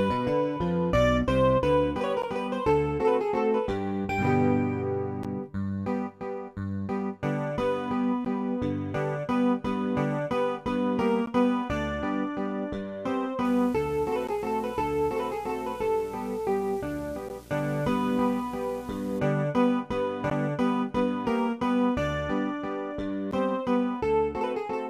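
The audio keeps dropping out for about 13 ms at 2.22, 5.23, 8.25, 11.26, 14.27, 17.29, 20.30 and 23.31 s. That's a gap between chunks: it was handled in 3 s blocks, and a sliver of silence opens at each join, so you get short hard-edged holes on a steady beat. On top of that, from 13.4 to 19.2 s there's video or display buzz, a 60 Hz hum at the picture's field rate. It sits roughly 20 dB under the main sound and comes from a screen or video cable coupling into the audio.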